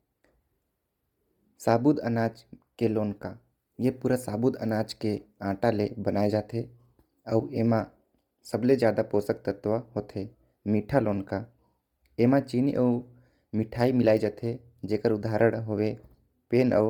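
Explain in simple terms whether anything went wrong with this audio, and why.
Yes, something went wrong, and it lasts from start to finish. The speech has a breathy, grainy edge, as if fine hiss were mixed into the voice. The likely cause is Bluetooth LC3 compression, the codec used by Bluetooth LE Audio. It chops the sound into 10 ms slices and saves space by discarding detail. Here it squeezed hard, so much of the upper sound was thrown away and replaced with filler noise.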